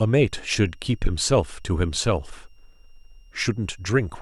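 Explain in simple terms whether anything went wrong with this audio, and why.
A faint, thin whistle sits behind the speech from start to finish, hovering around 2.8 kHz and wandering slightly in pitch. This is switching supply whistle: a power supply in the recording chain was running at an audible rate, leaking its tone into the audio.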